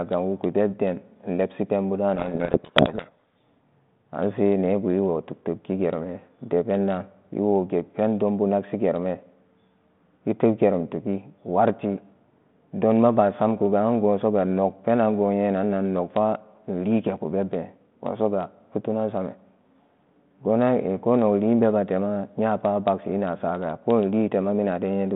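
Right after "inwugu bebden inlebsi penbuda", from 2.16 to 3.43 s, the speech is buried in harsh, grinding distortion: a codec payload misread, where the G.726 code words are unpacked with their bit order reversed, so each sample's difference value is decoded wrongly. Unlike the light coding hiss of the 32 kbit/s G.726 line heard around it, this damage switches on and off abruptly and drowns the speech rather than riding its level.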